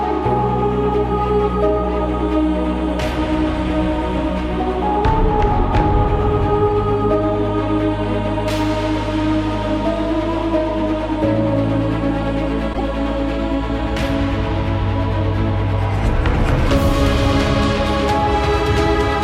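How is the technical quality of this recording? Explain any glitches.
One glitch stands out. Corrupt frame decoded, 12.73 to 12.81 s: damaged bits in a couple of compressed frames were decoded anyway, so misread gains and codes sprayed energy into wrong frequencies. For roughly 76 ms you hear a sharp chirp-like burst of noise peaking near -10 dBFS.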